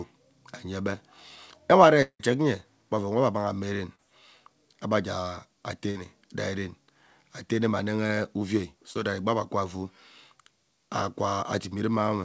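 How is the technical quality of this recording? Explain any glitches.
The quality is degraded by five network glitches, and the sound is band-limited to 8 kHz, consistent with a wideband call codec such as G.722.

At 2.02–2.21 s there is most likely a long network dropout. About 180 ms of audio never arrived, so the receiver extended the last sound as a fading continuation, then left roughly 80 ms of near-silence before the audio resumed further on.

At 3.95–4.00 s, 8.07–8.11 s, and 8.93–8.97 s, just before "that egbi ebe", there is short concealed packet loss. Each drops 20–40 ms, which the decoder patched with synthesized continuation, heard as a brief smear or wobble.

At 5.90–5.97 s a burst of packet loss cost about 40 ms. The receiver held and faded the previous sound, leaving a short fading stretch before the audio jumps ahead.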